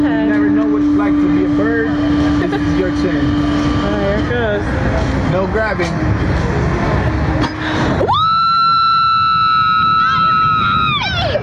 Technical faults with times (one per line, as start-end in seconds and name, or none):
0.00-11.42 gain pumping